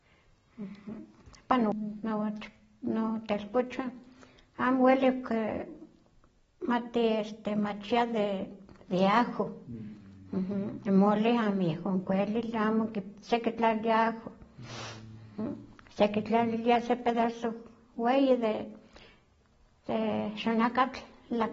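From start to finish the speech sounds dull and smeared, with nothing above 7.6 kHz and a warbly, fizzy edge on sustained sounds and sibilants. That's likely AAC compression, and the damage fits AAC-LC at a low bitrate, around 24 kbps, quantising away detail and lopping off the top end.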